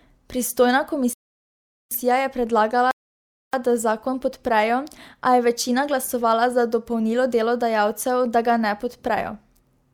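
At 1.13 s and again at 2.91 s, the speech halts in a rebuffering stall. The player runs dry, then resumes exactly where it stopped, adding 0.78 s and 0.62 s of silence.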